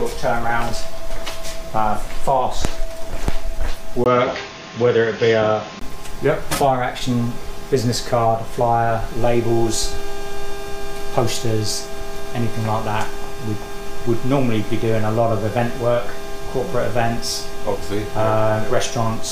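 From 4.04 to 5.81 s the sound turns dull and band-limited, with nothing above 6.8 kHz, a new noise floor roughly 30 dB down and no obvious level jump; a 20 ms gap marks the switch, likely an input switched to a poorer device.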